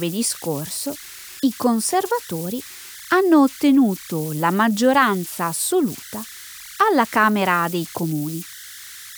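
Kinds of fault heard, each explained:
Converter idle tones: the delta-sigma converter here isn't dithered, so when the input gets small its output settles into repeating bit patterns, and those patterns come out as a tone whose pitch follows whatever DC offset is present. In this speech clip it runs the whole way through as a tone somewhere around 1.5 kHz, only about 18 dB below the speech.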